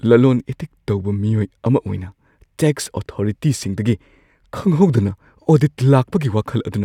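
Listening through the speech recording, nothing stood out as a technical problem at any point.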